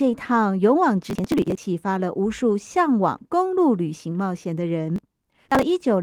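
From 1.10 to 1.63 s and again from 4.96 to 5.63 s, processor overload crackle: dozens of missed short buffers, roughly 10 ms each, are skipped outright. Unlike a single dropout, the skips cluster into gritty tearing.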